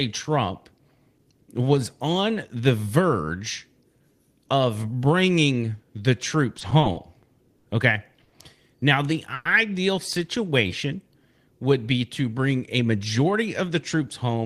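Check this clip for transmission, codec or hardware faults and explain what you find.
Four transmission faults turn up in this speech, all from packet timing on a network call path rather than from the codec or hardware.

Repeated stalls (stutter), 6.59 to 7.66 s, right after "of bringing the": packets kept arriving late or slower than playback, so the jitter buffer emptied six times. Each time the receiver extended the last sound to bridge the wait, about 150 ms in all, the longest hold 60 ms, roughly 14% of that stretch. Nothing is lost, but the speech drags and judders through this passage.

Short stall from a late packet, 8.24 to 8.34 s: a single packet missed its playout slot, the buffer ran dry, and the receiver stretched the preceding sound for 80 ms until the packet arrived, then resumed at the same point. The delay jumped by 80 ms as a result. You hear one sound held too long, with a faint buzzy quality, but no content is skipped.

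Call audio freeze, 9.34 to 9.47 s: the sound locks onto a held, buzzy continuation for about 110 ms, fading to a brief 10 ms of silence before the speech picks up exactly where it left off. The likely cause is packets held up in transit, leaving the jitter buffer empty while the receiver filled the gap. Nothing is missing, but a pause has been inserted and overall delay grew by 110 ms.

Jitter buffer speed-up, 12.78 s to the end, following "would be to bring": the buffer was holding more audio than its target, so the receiver trimmed short pitch-period-length pieces over and over to shrink the delay, removing roughly 150 ms in total. Playback runs at 108% speed with the pitch unchanged, so the closing speech sounds rushed.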